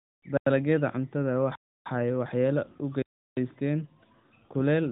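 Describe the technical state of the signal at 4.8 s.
At 4.8 s the signal is intact, with no fault, and the speech comes through the AMR narrowband mobile codec path, so nothing is heard above about 3.8 kHz.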